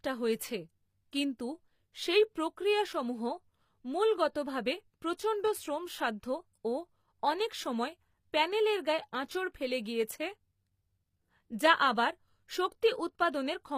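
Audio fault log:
Throughout: HE-AAC compression, likely at a low bitrate around 24 kbps. Sibilants sound gritty and metallic, and the treble ends near 15.5 kHz. Unlike a plain lowpass, the top stays bright because it is rebuilt from copied lower bands whose harmonics don't line up.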